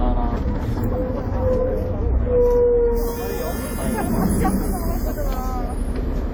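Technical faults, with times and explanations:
Throughout, WMA compression: ringing, washy smear and signal-following hiss, likely from long-block coding near 48 kbps; the spectrogram shows blurred, gappy detail reaching 20.1 kHz.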